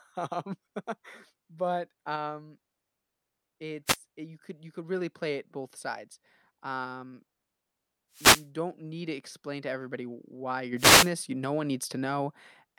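An analogue wireless microphone link loses signal strength in three brief dropouts, so receiver noise rises over the speech as wireless microphone noise hits: a short static swish at 3.86 to 3.97 s before "eh you could you", longer bursts at 8.12 to 8.48 s before "don't need to explain", and at 10.76 to 11.11 s after "to everybody why you're".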